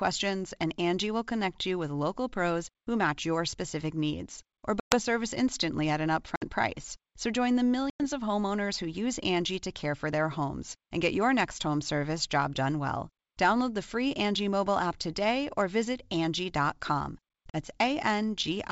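Hard-edged silent gaps at 4.80 s (120 ms), 6.36 s (60 ms), 7.90 s (100 ms) and 17.50 s (40 ms), each followed by a brief unsettled return of the sound. This is packet loss on an ADPCM call: lost packets became silence, and the decoder's predictor and step size fell out of step with the sender's until they resynchronised.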